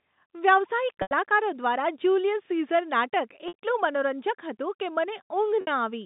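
Packet loss with pitch repetition occurs at 1.02–1.11 s (90 ms), 3.48–3.54 s and 5.61–5.67 s (60 ms each), consistent with 30 ms packets. The receiver repeats the last pitch period and fades it, giving a briefly held, buzzy tone that dies away before the telephone-band speech resumes.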